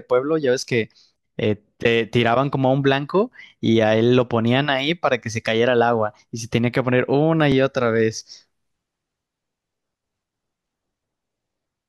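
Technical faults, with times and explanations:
3.50 s and 7.52 s, overlapping chunks: At each of these two points, a 20 ms slice of the speech plays twice. The audio was handled in 4-second chunks, and each new chunk began before the previous one had finished. The join therefore repeats a sliver of sound instead of continuing smoothly. At 20 ms the repeat is too short to hear as an echo. It comes across as a brief click or stutter, recurring about 4 seconds apart.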